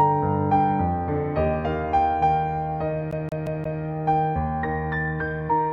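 At 3.11 s the audio falls into a CD stuck on one turn, running until 3.82 s. A flaw on the disc keeps knocking the laser back a track, so the same slice of about 0.18 s plays four times, each restart marked by a brief mute. It sounds like a rapid, perfectly regular stutter. On a waveform the identical segment repeats with thin gaps between copies; a spectrogram shows matching blocks separated by narrow vertical dropouts.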